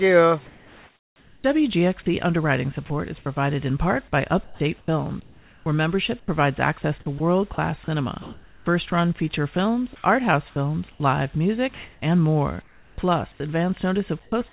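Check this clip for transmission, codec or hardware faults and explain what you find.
Several faults show up, all tied to the gaps between sounds, with everything above 4 kHz missing as expected of a narrowband call path.

Comfort noise in place of the background, 0.46 to 1.44 s, 2.86 to 3.26 s (about 120 ms of it) and 10.92 to 13.4 s (about 800 ms). The quiet background, sitting about 31 dB below the loudest passages, turns into a smooth, featureless hiss, about 2 dB quieter in the first stretch. The likely cause is discontinuous transmission: the sender went silent during pauses and the receiver synthesised noise roughly matched to the background.

Onset clipped by the voice detector, 1.42 to 1.44 s. The sound that ends the first comfort-noise stretch snaps in abruptly, its first 20 ms missing, so there is no soft attack. This likely happens because the sender's activity detector reacted late to the restart. 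It never sent those opening milliseconds, and the receiver kept playing synthetic noise where they belonged.

Sound dropped by the voice detector, 2.86 to 2.90 s and 10.92 to 11.00 s. Brief pieces of sound, about 40 ms and 50 ms, vanish into steady noise, each leading straight into a comfort-noise stretch. The likely cause is that the detector judged a quiet tail or faint sound to be background and stopped transmitting too early. The receiver then filled that gap with noise.

Sound chopped by the voice detector, 4.44 to 8.92 s and 14.22 to 14.52 s. Over the longer stretch the sound stutters, with about 1.4 s in total lost to fill. The final 0.3 s breaks up the same way, with about 140 ms lost. This is likely the detector toggling on and off repeatedly as the level hovered near its threshold.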